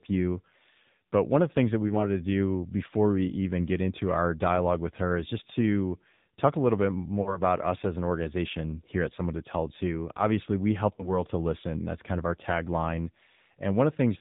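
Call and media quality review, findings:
AMR narrowband mobile codec, whole clip: band capped at 4 kHz, buzzy synthetic speech with plainly audible coding damage, consistent with a low AMR-NB mode around 7.4 kbps. Unlike generic low-pass filtering, pulse-excited vocal-tract modelling adds the buzz.

Lost AMR speech frames at 1.88–2.05 s (after "the things that we", before "to do before we"), 7.22–7.40 s, 9.16–9.20 s (after "an organization here at"), and 10.96–11.11 s (after "we help", before "to listen"). Decoder concealment repeats the last pitch and vocal-tract settings at falling gain, giving brief smeared dips. The 7.22 s event sounds longer, which fits two consecutive lost 20 ms frames, and the others fit single frames. Unlike a dropout, there are no hard gaps.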